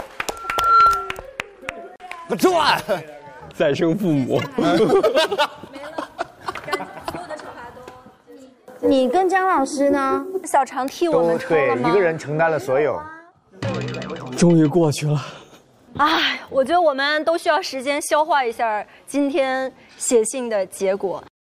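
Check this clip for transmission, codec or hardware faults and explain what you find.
One fault is present, an acoustic feedback problem in the playback and pickup chain. Loudspeaker feedback squeal, from 0.31 s to 1.24 s: a microphone is picking up the loudspeaker it feeds, and at 1.4 kHz the gain around that loop climbs above one, so the tone reinforces itself on every pass. It swells over roughly half a second into a piercing single-pitched whistle, standing about 10 dB above the surrounding sound, and cuts off at 1.24 s.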